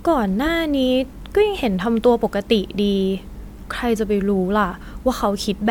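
No technical faults can be heard anywhere in the speech. There is no moment in the audio that calls for a time mark or an explanation.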